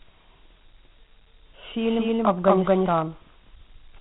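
Speech coded throughout as Dialogic VOX ADPCM, with gritty hiss trailing the voice and nothing above 3.9 kHz, which fits 32 kbps 4-bit coding; unlike plain telephone band-limiting, the grit tracks speech. From 1.83 to 2.89 s a doubled audio track appears: a full-band copy, about as loud, roughly a fifth of a second behind, starting and stopping abruptly without room decay, unlike reverb. The likely cause is a second capture path or a misaligned edit.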